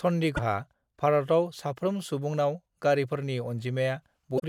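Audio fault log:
0.33–0.39 s and 4.36–4.43 s, damaged data in a compressed stream. Two brief bursts cut through the speech, each about 65 to 70 ms long. They sound like a squawk or blip rather than the talker. Here the compressed data itself is corrupt. The decoder misreads those frames and loses its place in the stream. It then hunts for the next valid frame header. Until it locks on again, garbled output replaces the real audio.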